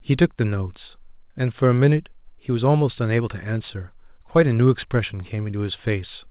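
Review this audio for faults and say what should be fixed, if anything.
Nothing here needs fixing, so you can leave this one as it is.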